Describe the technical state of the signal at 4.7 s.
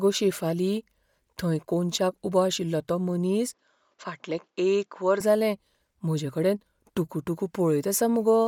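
At 4.7 s the speech is inside a stretch from 3.54 to 5.21 s where the sound has likely come through an input switched to a poorer device. Nothing reaches above 7.6 kHz, so the top of the band is gone and the speech turns dull and boxy. The level drops a few decibels. A faint new noise floor sits far below the speech. The change happens with no gap at the switch, and the fuller sound returns at 5.21 s.

The same moment also carries Bluetooth LC3 compression, which runs through the whole clip. The damage is plainly audible. The sound is likely coded by LC3, a transform codec that drops much of the upper spectrum and fills the gaps with synthetic noise. That gives the speech a breathy, grainy edge. The character fits 10 ms frames at around 48 kbps. Outside the switched stretch, the band reaches up to about 20.2 kHz.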